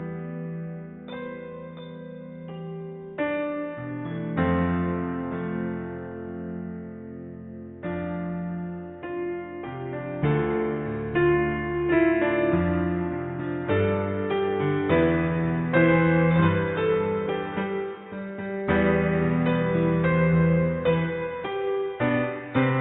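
No technical faults can be heard anywhere in the clip. Nothing in the audio calls for a time mark or a note on what went wrong.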